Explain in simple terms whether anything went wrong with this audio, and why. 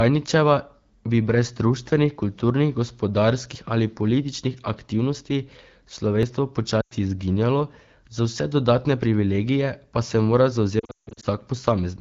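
Two kinds of problem can be heard in this speech.

At 3.55 s, just before "ali političnih aktivnosti", and again at 6.23 s, there is a sudden jump forward in the sound, as if a tiny slice were snipped out. Roughly 30 ms goes missing each time, with no gap of silence. This is a dropped buffer (overrun), likely caused by the recording software failing to collect a chunk of audio before the hardware wrote over it.

From 6.81 to 6.94 s, just before "izginjalo za vse dodatne", the voice briefly smears and dips for about 100 ms before recovering. Later, right after "pa se mora", from 10.79 to 11.25 s, it repeatedly warbles and drops away, with 320 ms lost in patches and the longest single gap 160 ms. These are lost AMR speech frames. Radio errors spoiled pieces of the phone signal, and the decoder filled in by repeating the last good sound more and more quietly. The clear HD Voice quality can be heard on either side of these patches.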